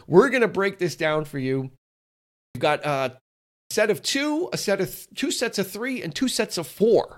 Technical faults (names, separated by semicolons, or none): clipped start after a pause